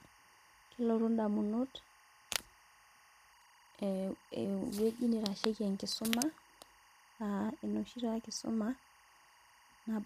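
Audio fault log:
throughout  timecode bleed: A steady chirping warble sits behind the speech, flipping between two pitches at 1 kHz and 2 kHz, roughly 30 dB below the voice. Linear timecode from a neighbouring track or cable is leaking into the audio path. Timecode is a square wave whose pitch changes with each bit, which produces the fast alternating chirp. Its rhythm repeats in a pattern that fits code running at 24 frames per second.
throughout  low-delay AAC compression: The voice sounds plainly rough and grainy, with a hiss filling the gaps between harmonics and an upper band that seems thinned and synthetic. The likely cause is low-delay AAC, the AAC-ELD codec used for video calls, which fits a bitrate near 32 kbps. Its short frames cannot separate closely spaced voice harmonics cleanly. At that bitrate, noise leaks between them and the treble is rebuilt rather than coded.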